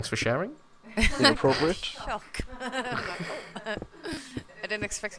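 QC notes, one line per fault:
No fault found, so there is nothing to log in these QC notes.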